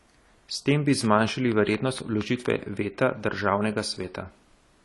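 All the way through, the speech has the dull, smeared quality of AAC compression, likely AAC-LC at a low bitrate; the damage is plainly audible and fits something around 32 kbps. There's nothing at all above 11.4 kHz, so the top end is cut off flat, and the coder has thinned out the spectrum to save bits. That leaves the speech sounding muffled, with a watery, fizzy edge where the detail used to be.

Right after "tem bi", at 1.05 s, a train of clicks starts and runs until 2.47 s. They tick along at a steady 4.25 per second, about seven in all, each much the same shape and peaking roughly 10 dB above the speech, so they stand out clearly and sit on top of the talking as a regular popping. Such even spacing points to a likely cause like electrical interference from nearby gear or a faulty connection or power supply.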